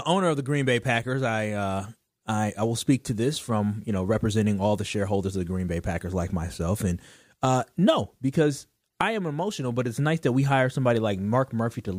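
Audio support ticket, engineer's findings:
No faults found in this speech clip, so the engineer's findings have nothing to report.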